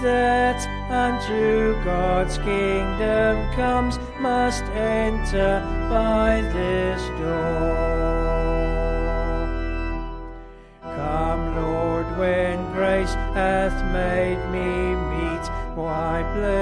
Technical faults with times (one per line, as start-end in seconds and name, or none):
none